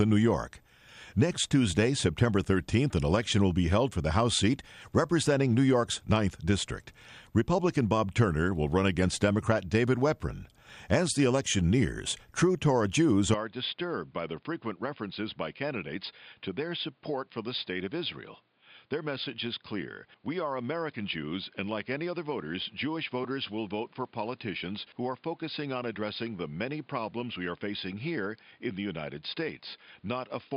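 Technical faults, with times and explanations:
13.34 s to the end: input switched to a poorer device. With no gap at the changeover, the sound abruptly turns dull and boxy, with nothing above 5 kHz, drops by about 10 dB, and gains background noise of its own, about 35 dB below the signal. The likely cause is the recording moving from its original microphone to a lower-grade input, such as a headset in call mode, whose narrow band, weaker gain and own noise floor produce all three changes at once.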